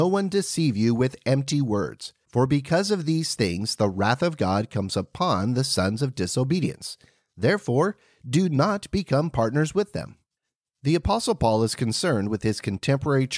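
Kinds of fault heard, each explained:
No technical faults detected.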